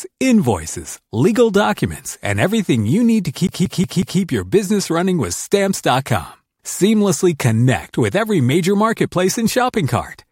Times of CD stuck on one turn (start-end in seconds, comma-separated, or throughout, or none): 3.47-4.20